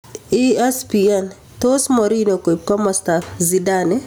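Gain pumping runs throughout this speech clip: the level swings around 15 dB, leaving loud and soft parts closer in level and the sound squashed, likely from excessive input gain driving a fast limiter.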